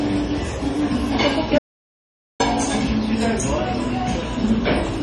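Throughout the clip there is heavy MP3 compression damage. Nothing sounds above 11.4 kHz, a hard ceiling where the encoder likely ran short of bits and discarded the treble. The remaining sound is watery and swirly, and transients smear. This points to a very low bitrate, around 32 kbps. A simple low-pass filter would leave the band below the cut steady. Here the weaker components flicker in and out from frame to frame, and that shimmer is what marks it as a codec fault.

From 1.58 s to 2.40 s comes an audio dropout to silence, about 0.81 s long. The sound stops abruptly in mid-flow and resumes just as suddenly. Between those points there is silence, with no room tone or noise floor underneath. Most likely the input was lost while recording carried on writing silence. A deliberate pause or a quiet passage would keep some background. A noise gate would usually ramp in and out rather than cut straight to silence.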